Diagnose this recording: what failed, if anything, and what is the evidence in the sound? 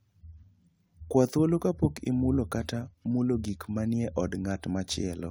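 Clock slip clicks from 0.13 to 5.25 s: ticks about every tenth of a second, likely one-sample slips between unsynchronised converter clocks, showing as evenly spaced thin vertical lines on a spectrogram.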